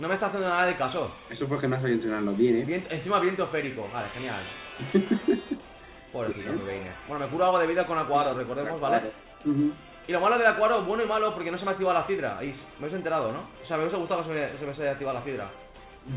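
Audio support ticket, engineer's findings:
Nothing stood out on listening; the audio carries the narrow, telephone-like band of a G.711 A-law call path at 64 kbps with nothing above 4 kHz, as expected for that route.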